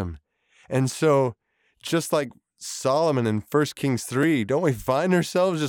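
At 2.30 s and 4.23 s, blocks of digital silence of 6.8 ms and 1.0 ms cut the speech abruptly without fading, leaving ticks rather than audible gaps.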